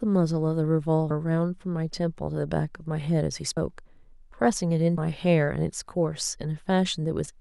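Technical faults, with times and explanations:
1.10 s, 3.57 s and 4.98 s: compressed frames skipped. At each point the speech jumps forward, losing roughly a tenth of a second at 1.10 s, a little less at 3.57 s and about 150 ms at 4.98 s. Each gap matches a small whole number of 32 ms frames that never reached the output.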